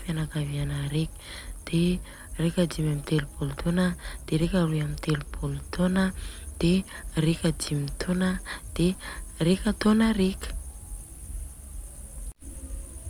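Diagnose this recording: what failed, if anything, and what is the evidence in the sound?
Nothing failed; there is no evidence in the sound of a fault at any stage of the recording.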